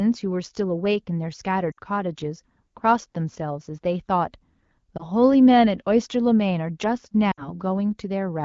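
Lost AMR speech frames at 1.71–1.79 s, 4.98–5.05 s and 7.31–7.56 s: the decoder repeats stale pitch and vocal-tract settings at falling gain, giving a brief dip at 4.98 s and drops to near silence in the longer gaps before the wideband speech resumes roughly.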